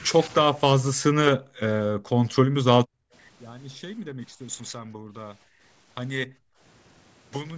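The echo canceller likely could not separate this talker from the far end during double talk, so speech was suppressed at 0.03–0.12, 0.94–1.61, 1.93–3.13, 3.78–4.39, 4.71–5.63 and 6.27–6.61 s. The speech dips slightly at first, then drops deeply or cuts out in pieces, worst around 1–3 s.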